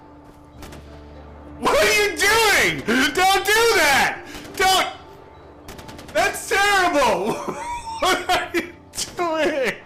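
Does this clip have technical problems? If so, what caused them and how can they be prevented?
No, nothing technical goes wrong anywhere in this one, so there's no cause to track down and nothing that needs preventing.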